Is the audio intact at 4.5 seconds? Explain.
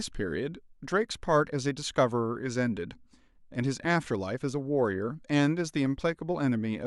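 Yes, the speech at 4.5 seconds plays through intact, with no dropout, click, distortion or other fault at that moment.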